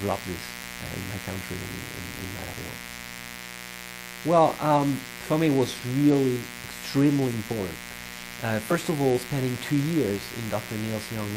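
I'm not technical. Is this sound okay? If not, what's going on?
No. Three problems can be heard.

There is a mains buzz all the way through. Electrical interference from the power supply at 60 Hz leaks into the recording. It adds a steady, raspy hum. The hum is fairly loud compared with the sound itself.

There are also periodic USB or driver dropouts. From 0.11 s to 11.27 s, something in the computer briefly stalls the audio about sixteen times a second. Each stall drops a tiny sliver of sound. The result is a fast, regular ticking.

Finally, compressed frames are skipped at 0.62, 2.52, 6.63 and 8.70 s. Small blocks of the compressed audio are lost there, so the sound jumps forward. The jump is about a twentieth of a second at 0.62 and 6.63 s, and about a tenth at 2.52 and 8.70 s. Each jump sounds like a brief smeared blip.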